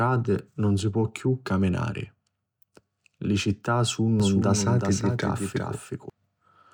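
From 4.20 to 6.10 s the speech picks up a doubled audio track: a second, full-band copy trailing roughly 400 ms behind, around 5 dB quieter, dry and with no room tail, switching on and off abruptly. Likely a slower second capture path mixed back in.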